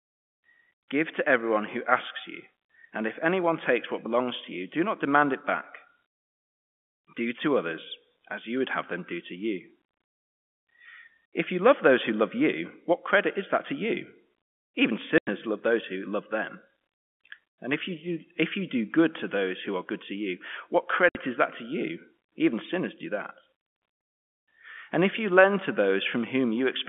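Packet loss filled with silence cuts this telephone-band speech clip at 15.18 s for 90 ms, just before "love those who love", and at 21.09 s for 60 ms, between "good to you what" and "is that to you". Lost packets were replaced with silence, leaving hard-edged gaps whose lengths fit 30 ms packets.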